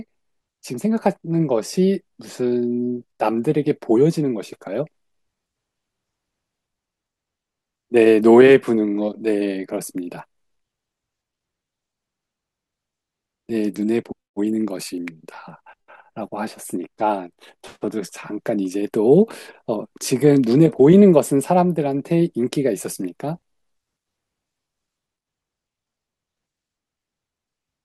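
Nothing goes wrong anywhere in this bit of speech, so there's really nothing to point out.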